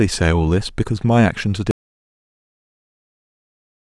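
At 1.71 s the speech cuts off into an audio dropout to silence that lasts to the end: dead silence with no room tone, unlike a fade, likely from lost input.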